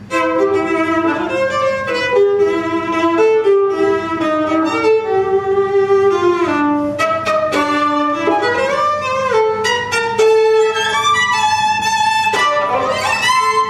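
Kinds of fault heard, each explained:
No technical faults can be heard in this recording.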